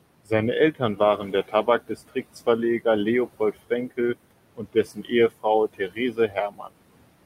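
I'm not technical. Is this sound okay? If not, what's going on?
No. The speech has noise suppressor artifacts running through the whole clip. A noise suppressor is a filter that tries to remove steady background hiss. Here it pushes the room noise down hard between the words. Under the words, the noise comes back up. So the background seems to pump in and out.

There is also speech cut by the noise suppressor. The filter mistakes parts of the speech for noise and turns them down too. This happens at 0.72 to 1.0, 1.18 to 1.68, 1.88 to 2.37, 4.56 to 5.12 and 5.68 to 6.74 seconds. Soft sounds and word endings go faint or swallowed. Within each stretch, only short moments drop away. The last two stretches lose the most speech.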